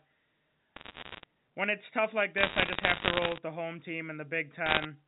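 From 0.76 to 1.24 s, just before "when it's tough like", there are bit errors on a digital phone line. Flipped bits corrupt single samples of the G.711 A-law stream, and these come through as sharp ticks crackling over the speech. It gets denser at 2.38 to 3.38 s, running up to "the home", and again briefly at 4.66 to 4.85 s.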